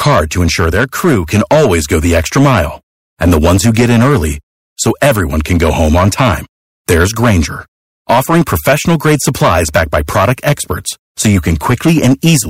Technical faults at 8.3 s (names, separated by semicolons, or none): hard clipping